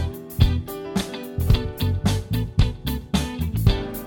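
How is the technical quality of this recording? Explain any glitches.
Nothing in this recording sounds broken or glitchy to me; the audio runs along steadily with no dropouts, clicks or sudden jumps worth pointing out.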